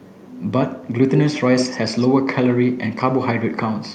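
An echo leak at 1.08 to 1.41 s and 1.57 to 2.08 s repeats the speech 131 ms late, about 5 then 10 dB quieter, likely from incomplete loudspeaker echo cancellation.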